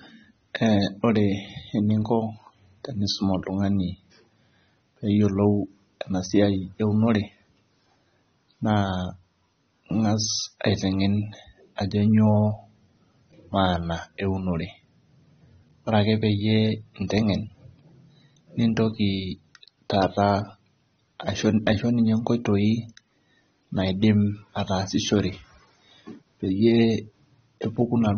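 AAC compression runs from start to finish of the speech, with nothing above about 6.3 kHz. The encoder has discarded the upper spectrum and coarsely quantised what remains, so consonants lose their crispness, sibilants turn fizzy and smeared, and sustained vowels carry a warble. The damage is plainly audible, and it is likely the work of AAC-LC squeezed to a low rate, which fits a bitrate around 24 kbps.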